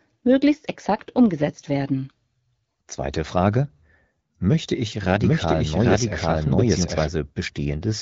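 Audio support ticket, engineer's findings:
Doubled audio track, 5.20–7.08 s. Likely second capture via slower path, or edit holding two out-of-step copies. Full-band copy trails roughly 0.7 s behind at about equal level; no decay, no room colour; starts and stops abruptly.

AMR wideband (HD Voice) codec path: speech band-limited near 7 kHz, light coding damage, consistent with the 12.65 kbit/s mode.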